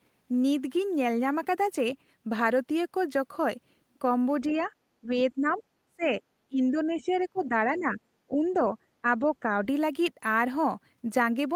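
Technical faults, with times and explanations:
4.5 to 9.55 s, speech suppressed in double talk: The speech level dips and recovers repeatedly across this stretch. The deepest drop is about 15 dB, and the dips add up to roughly three seconds. The likely cause is an echo canceller hearing both sides at once. It could not tell the talker apart from the loudspeaker echo, so it pulled down everything together.
5.54 to 5.58 s, 7.0 to 7.39 s and 7.78 to 7.83 s, other side's voice leaking through: Faint scraps of a second voice sit under the speech. The first is very low, about 35 dB below the talker, and only a brief blip. The longest is the one at 7 s. The last is the loudest, about 25 dB down. This likely comes from a loudspeaker playing the far side into the microphone, with the echo canceller leaving residue behind.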